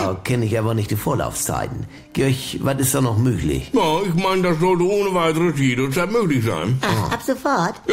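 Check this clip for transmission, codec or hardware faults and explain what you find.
Nothing in the signal points to a transmission, codec or hardware problem; it stays continuous and stable throughout, with no dropouts, distortion or other disturbance to report.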